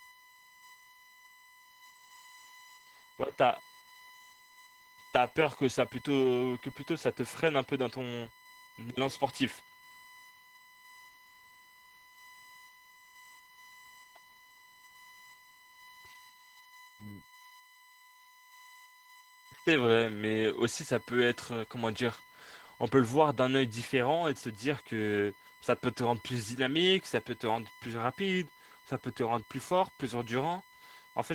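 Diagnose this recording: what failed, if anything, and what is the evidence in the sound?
USB whine is running under the speech for the whole recording, a steady tone at 1 kHz with its strongest part at 2 kHz, sitting roughly 25 dB below the speech. That's the analogue wiring stage: the bus draws current in 1 ms frames, and that ripple is leaking in through shared power or ground.

Opus voice compression damage is plainly audible throughout, in the codec stage. The speech comes out hoarse and slightly robotic, with the top end present but coarse. That fits Opus in hybrid mode at around 16 kbps: the SILK coder handles the lower band, a thin CELT layer codes above 8 kHz, and both quantise coarsely.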